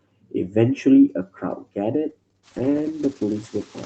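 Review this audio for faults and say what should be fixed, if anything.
A call bitrate drop at 2.1 s, from 32 to 10 kbps, makes Opus code coarsely, so the speech turns rough and muffled to the end. To prevent it, give the call steadier bandwidth or raise the encoder's minimum bitrate so the estimate cannot collapse that far.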